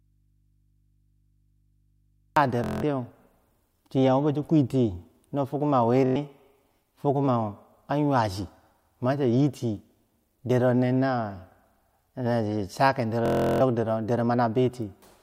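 The clip opens in an audio dropout to a faint residue that is already under way at the start and lasts until 2.37 s. The speech is absent, and only a low mains hum remains, roughly 40 dB below the normal signal level. The likely cause is a broken signal path ahead of a stage that stayed live and picked up hum from an open input. On a waveform this stretch is a thin, near-flat band that jumps abruptly to full level. A spectrogram shows only narrow hum lines at the bottom until the broadband speech energy appears.

Bluetooth stutter follows at 2.64–2.83 s, 6.06–6.16 s and 13.26–13.61 s. Each run is a rapid buzzing repeat of one short slice. The receiver replayed its last buffer while data was lost, covering about 186 ms, 93 ms and 348 ms. The sound then resumes further along, as if it had kept playing. The lengths fit runs of roughly 8, 4 and 15 lost packets. On a spectrogram these runs appear as evenly spaced vertical stripes. 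A waveform shows the same small chunk tiled repeatedly.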